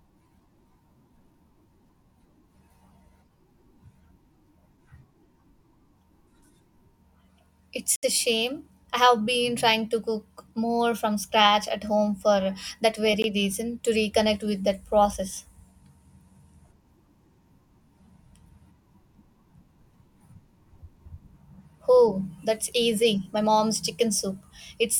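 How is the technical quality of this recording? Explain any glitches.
The speech is interrupted twice by a Bluetooth stall, where the wireless link most likely held up packets, the headphones' buffer ran empty, and playback halted until the delayed audio arrived. From 7.96 to 8.03 s, just before "a shame I have", the sound drops to silence for about 69 ms and then resumes. At 13.22 s, right after "at home for that", a much shorter gap of 17 ms registers as a brief dropout.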